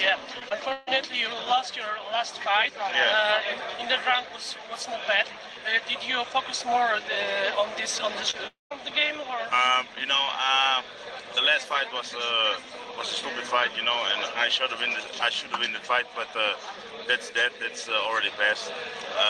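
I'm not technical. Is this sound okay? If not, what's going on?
No, there are three network-related faults.

From 0.39 to 0.89 s there is repeated packet loss (robotic sound). Four chunks of audio went missing in quick succession, the longest 142 ms. The receiver patched each gap by stretching the previous sound, so about 39% of that stretch is filled-in guesswork and sounds choppy with pieces missing.

From 8.31 to 8.35 s there is a short concealed packet loss. About 20 ms of audio never arrived, and the receiver covered the hole by extending what came just before. It is heard as a brief smear or wobble rather than a clean gap.

From 8.47 to 8.72 s the sound briefly continues as a fading fill, then cuts to silence for about 160 ms before returning with that portion missing. This is likely a long network dropout, where the connection delivered nothing for roughly a quarter of a second.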